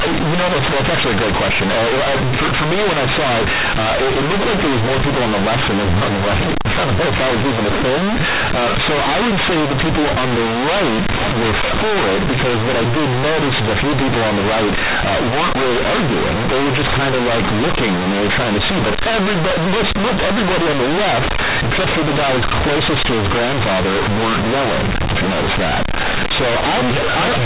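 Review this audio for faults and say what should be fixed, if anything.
Companded audio read as linear runs through the whole speech recording. The A-law bytes are played as plain linear 8-bit samples without expansion. Every sign change swings the output across half its range. Quiet passages become as loud as peaks. The result is harsh, buzzy distortion with heavy noise in pauses. The audio is limited to the telephone band below 4 kHz. To prevent this, decode the A-law stream through a proper G.711 expander before treating it as PCM.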